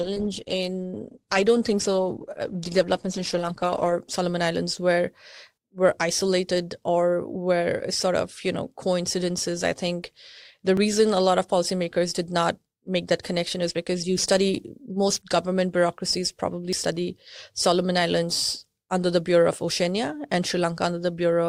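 From the start to about 3.98 s the speech plays as an adaptive stream starting at a low bitrate. The treble sounds thin and smeared, and a spectrogram shows nothing above 12.2 kHz. At 3.98 s the quality snaps up with no gap, which fits a step from roughly 16 to 64 kbit/s Opus.

At 10.77 s there is a skip where audio is missing between chunks. Around 20 ms vanishes and the two sides butt together. The waveform shows an abrupt discontinuity with no silence, and a spectrogram shows a thin vertical splice. This is likely from a recorder handling 3 s chunks.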